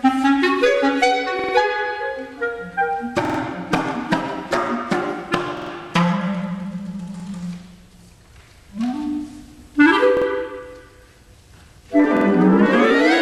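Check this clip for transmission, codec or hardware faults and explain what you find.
Six repeated-buffer stutters are audible, at 1.39, 3.25, 5.57, 7.20, 10.17 and 12.17 s. At each, a piece of about 46 ms, which fits a 2048-sample buffer, replays one to three extra times with a hard join, lasting 0.05 to 0.14 s. Fresh audio arrived late, so the device reissued its last buffer, and little or nothing is lost afterward. On a waveform, identical blocks tile side by side; a spectrogram shows vertical seam lines at each join.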